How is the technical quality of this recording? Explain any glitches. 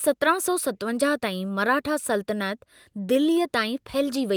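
The technical quality of this recording is sound, with no glitches to explain.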